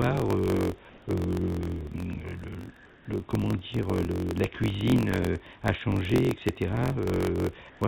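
From start to end, a block size mismatch (truncated) puts a steady buzz at about 45.9 Hz over the speech, which runs 1.07 times fast at near-normal pitch. That fits 1024-sample blocks written with each tail dropped. Unlike resampling, it speeds the audio without raising the pitch.

From 0.89 to 1.06 s, 2.86 to 3.06 s and 7.70 to 7.81 s, comfort noise in place of the background swaps the detailed room noise for a smooth, featureless hiss. Its level is unchanged at first, about 3 dB quieter in the second gap and about 1 dB louder in the third. This is likely a sender halting transmission in pauses. Unlike a dropout, the gap is filled rather than silent.

From 7.79 to 7.81 s, an onset clipped by the voice detector makes the returning sound begin abruptly, with about 20 ms of its soft start missing and comfort noise in its place. The cause is likely a detector reacting late. Unlike a click or a gain jump, it removes the start of the sound.

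Throughout, the band stops at 4 kHz, as the call codec normally does.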